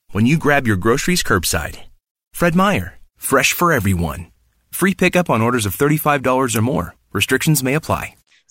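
Nothing stood out as a technical fault anywhere in the recording on listening.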